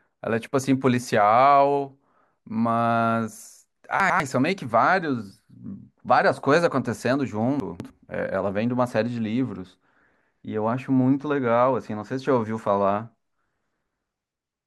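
At 4.0 s the speech briefly jumbles for about 0.2 s, a case of chunks out of order: a 100 ms piece of audio arrives one chunk late and plays after the piece that should follow it. At 7.6 s it happens again over about 0.3 s, this time with a 100 ms chunk displaced by two positions. Both spots sound like a garbled hiccup. Unlike a dropout or skip, nothing goes missing; the same sound is present, only scrambled.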